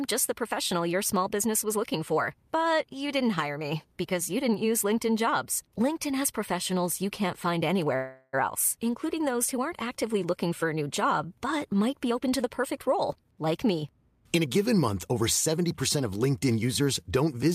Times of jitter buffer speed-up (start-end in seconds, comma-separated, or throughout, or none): 12.04-16.21